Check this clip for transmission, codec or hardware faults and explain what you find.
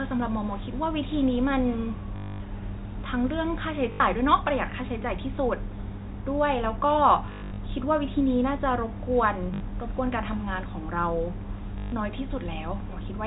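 The speech shows one recurring transmission fault, heard through a telephone band that stops at 4 kHz.

Packet loss with last packet repeated occurs at 2.16–2.40 s, 3.92–4.00 s, 7.26–7.58 s (scattered, longest run 100 ms), 9.54–9.60 s and 11.78–11.92 s. When packets went missing, the receiver replayed the last one it had. Those copies seldom line up with the pitch. The longer gaps buzz at about 50 Hz, which fits 20 ms packets, and sound like a brief robotic stutter.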